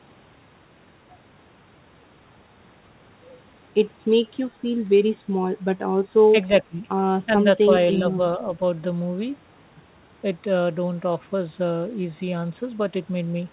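From 6.32 to 6.86 s, and again from 7.26 to 7.6 s, the speech dips in level. The first dip reaches about 15 dB down and the second only about 5 dB. This is likely speech suppressed in double talk, where an echo canceller mistook the talker for loudspeaker echo. The band ends near 4 kHz, which fits a G.711 A-law call at 64 kbps.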